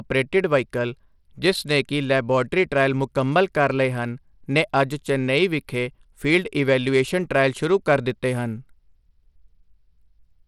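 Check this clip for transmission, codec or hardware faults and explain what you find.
One fault runs through the whole clip. The speech shows Bluetooth SBC compression damage, plainly audible from start to finish. SBC likely squeezed the signal into a small bit budget, which points to a stream of about 96 kbps. Its sub-bands got too few bits. Nothing remains above 16.5 kHz. The treble flickers, and a gritty, coarse noise clings to the speech.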